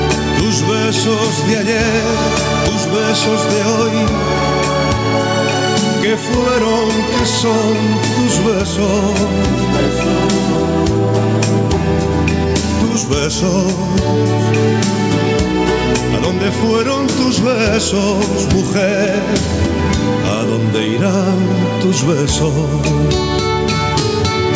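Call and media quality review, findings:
Gain pumping, throughout the clip. The level swing is about 10 dB, which flattens the dynamics and squashes the overall texture.

Likely cause: the input gain is set far too high for the microphone, and a fast limiter or compressor in the capture chain clamps down on each peak.

Call microphone processing is also present. Its high-pass filter trims the lowest bass, and content stops near 8 kHz. Neither is connected to the pumping.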